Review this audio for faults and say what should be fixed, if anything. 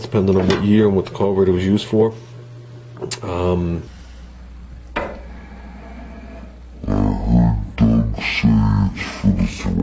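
From 3.87 s to the end, the audio plays with the wrong sample rate: it runs at half speed and drops a full octave (12 semitones), which fits 32 kHz material being played at 16 kHz without conversion. To prevent this, resample to the device rate before playback.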